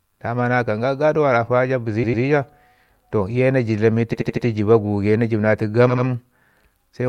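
Repeated frames occur three times. At 2.03–2.23 s a 100 ms stretch of speech plays twice more, adding 200 ms. At 4.13–4.45 s, right after "toh iye na dlam", an 80 ms block repeats four extra times, adding 320 ms. At 5.89–6.05 s an 80 ms block plays twice more, adding 160 ms. Each time, a short run of compressed frames was delivered again, so the decoder replays the same fragment and the speech stutters and stretches.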